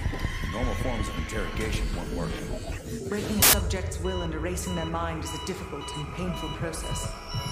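At 3.42 s the audio breaks into a harsh burst of loud broadband noise that lasts about 110 ms, ending at 3.53 s. This is samples built from the wrong bytes. The reader has assembled each sample's bytes incorrectly, perhaps shifted by one byte or in the wrong order. The rapidly changing low bits end up carrying most of each value.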